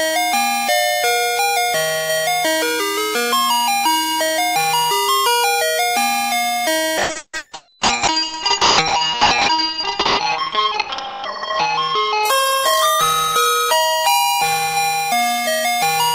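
A recording of everyday sounds with a call bitrate drop from 6.99 to 15.07 s: the top end gets cut at 8 kHz and it turns rough and watery, bottoming out for about 3.25 s, consistent with the codec starving down to just a few kbps.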